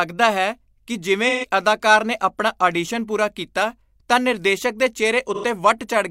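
Speech with two short smeared, noisy patches, at 1.29 to 1.46 s after "ਹੈ ਕਿ ਜਿਵੇਂ" and at 5.34 to 5.44 s after "ਕੀਤਾ ਤਾਂ ਨਿਰਦੇਸ਼ਕ ਦੇ". This is AAC frame loss with concealment: the decoder patches each gap from the last good spectrum, consistent with about three and two lost frames.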